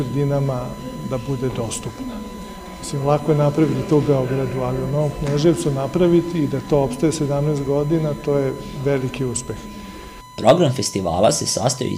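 From start to finish a USB whine sits under the sound, a steady tone at 1 kHz roughly 20 dB below the signal. It comes from the USB bus drawing current in 1 ms frames, which leaks into the audio through the power or ground.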